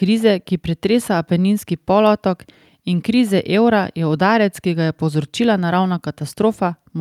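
No technical faults can be heard anywhere in the recording.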